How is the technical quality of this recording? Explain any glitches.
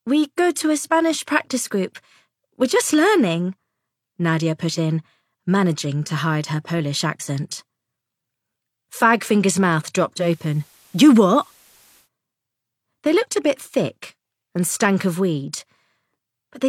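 There is one glitch. Digital radio blending to analogue, 10.18 to 12.09 s: the receiver cross-fades over 114 ms to FM, bringing faint hiss and a level shift of about 1 dB.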